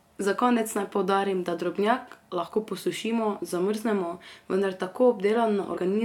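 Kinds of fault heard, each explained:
Compressed frames skipped: whole 23.2 ms coded frames go missing, so the speech leaps ahead by about one frame at 2.46–2.48 s after "naj poudarim da drobnjak" and about two at 5.76 s. Each join is an abrupt jump in the speech rather than a gap of silence.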